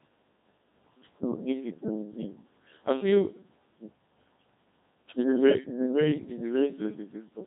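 Throughout the speech, a Codec 2 vocoder keeps only pitch, voicing, loudness and a coarse spectral shape, then rebuilds the voice from sine waves. It sounds heavily robotic and buzzy with nothing above 3.8 kHz, which fits a rate near 2.4 kbit/s.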